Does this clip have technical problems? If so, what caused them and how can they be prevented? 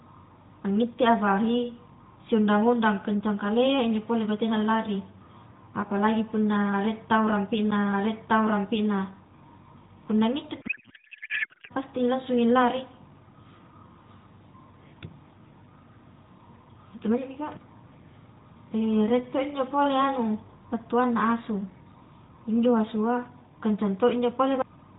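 Yes. At 7.71 s there is a brief tick and a mute of roughly 10 ms before the speech carries on from a different point. That is a CD skip: a knock or disc flaw made the laser jump tracks. Cushioning the player and cleaning or replacing damaged discs prevents it.

From 10.62 to 11.72 s, just after "punna ngitte", the speech turns into garbled noise and warble that barely follows it. This is a codec payload misread, in which octet-aligned AMR frames were likely unpacked as bandwidth-efficient ones, so every field landed in the wrong place. Both ends agreeing on the same AMR payload format during call setup prevents it.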